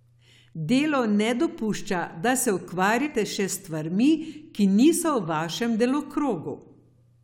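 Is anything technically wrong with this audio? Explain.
Yes. At 3.05 to 3.07 s, just after "da se", damaged data in a compressed stream makes the decoder lose sync and hunt for the next frame, producing a brief glitch.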